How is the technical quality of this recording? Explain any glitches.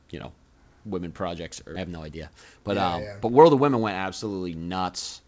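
The recording has three glitches: one skip ahead and two jitter buffer speed-ups. It passed through a call codec, and nothing is heard above 8 kHz, which fits a wideband codec like G.722.

At 1.76 to 1.78 s there is a skip ahead. About 0.7 s of speech was dropped while later audio waited. Playback jumps forward with no gap.

From 1.85 to 2.89 s, and again from 3.29 to 3.92 s, there is a jitter buffer speed-up. The buffer held too much audio. It trimmed pitch-period slices, about 70 ms each time. The speech runs 5% and then 9% faster at unchanged pitch and sounds hurried.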